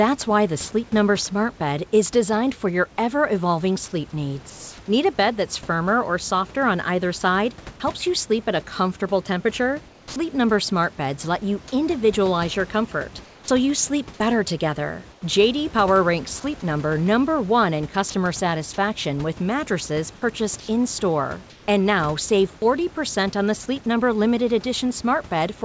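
Comfort noise in place of the background appears in the pauses at 4.50–4.78 s, 9.88–10.16 s, 13.24–13.48 s and 15.12–15.22 s. The room noise, about 21 to 26 dB below the speech, turns into a smooth, featureless hiss. It drops by about 1, 4, 4 and 6 dB in turn. The likely cause is discontinuous transmission: the sender stopped sending in silence, and the receiver synthesised noise from a rough spectral description.

At 18.10–18.14 s, sound dropped by the voice detector is different. About 20 ms of the sound itself is lost, and 40 ms of steady noise takes its place. This likely happened because the detector judged that sound to be background. Unlike the pauses above, real signal disappears here, not just background texture.

The comfort noise returns at 20.60–20.68 s, about 1 dB louder than the room noise, and at 21.50–21.68 s, about 2 dB quieter. Both times the real background loses its detail and sounds flat and uniform. 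The substitute noise is limited to the G.722 band, with nothing above 8 kHz.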